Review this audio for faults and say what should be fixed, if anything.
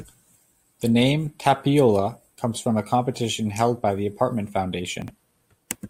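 Chunks out of order at 5.02 to 5.1 s: one 20 ms chunk plays three chunks late, after the audio meant to follow it. This leaves a brief jumbled stretch with three hard joins. Unlike a dropout, nothing is missing; the same audio is only reordered. Tag each chunk with a sequence number and reorder in a jitter buffer before playback or writing.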